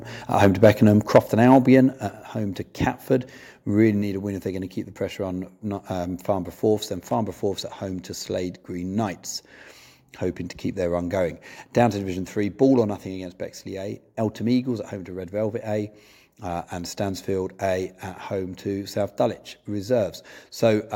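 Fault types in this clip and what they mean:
Microphone overload: The loudest stretches of speech have their peaks flattened, giving a harsh, crackly edge. It is heaviest from 0.41 to 1.19 s, where the signal pushes about 8 dB past the converter's limit and around two percent of samples are squared off. A milder episode from 1.52 to 1.75 s is about 1 dB over, with under one percent clipped. The likely cause is input gain set too high for the converter. Unlike a level drop, this distortion rides on the peaks without changing overall loudness.
Microphone volume stepped down: The whole sound, speech and background together, becomes quieter in one sudden step. The first step is about 3 dB at 1.16 s, right at the tail of the first distorted stretch, and a second follows at 2.16 s, about 4 dB. This is likely the call software cutting the input gain after sensing clipping. It differs from overload in adding no harshness. 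Only the level falls and stays down.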